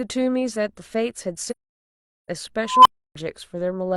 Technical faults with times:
1.50-2.28 AAC frame loss with muting
2.65-3.15 unstable filter

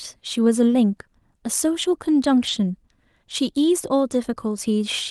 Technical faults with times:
2.43-2.49 lost packet rebuilt from error correction

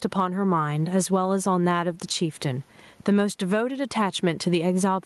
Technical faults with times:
0.00-5.05 gain pumping

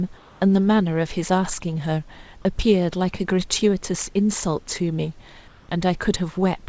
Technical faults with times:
0.17-0.41 comfort noise in place of the background
5.48-5.69 comfort noise in place of the background

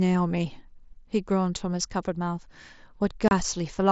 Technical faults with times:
3.28-3.31 unconcealed Bluetooth headset packet loss

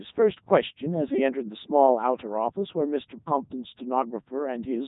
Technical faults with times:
0.00-4.88 Codec 2 vocoder

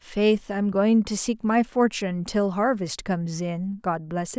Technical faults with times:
none

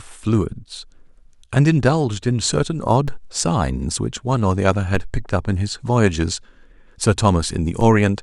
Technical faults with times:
3.08 DC step
4.95 DC step
7.81 DC step

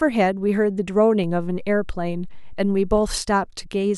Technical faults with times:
1.24-2.98 DC step

